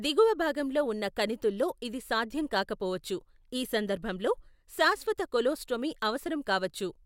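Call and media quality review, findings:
No faults found in the speech recording. Nothing heard calls for follow-up on this ticket.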